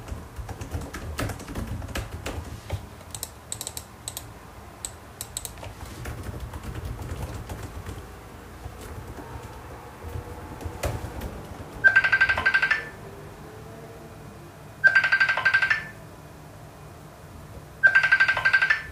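From about 5.70 s to 11.17 s there's a wrong sample rate problem. Everything runs about 1.09 times fast and sits roughly 1.47 semitones sharp, with speed and pitch rising together. That fits 44.1 kHz material played back at 48 kHz without any conversion.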